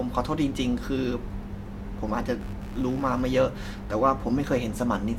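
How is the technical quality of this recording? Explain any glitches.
A fault appears in the latter part of the speech: computer activity noise, from 2.41 s to the end at 5.19 s. Changing load on the processor, graphics card or mouse shifts the ground shared with the audio circuit, and those fluctuations ride into the recording path. The result is a buzzy, chirping rasp pulsing at roughly 70 times per second, sitting around 30 dB below the speech, and it tracks the machine's activity rather than the spoken sound.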